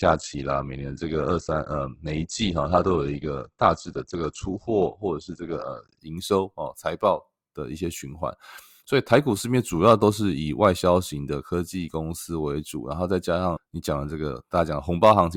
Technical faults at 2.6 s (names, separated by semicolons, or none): adaptive stream starting at a low bitrate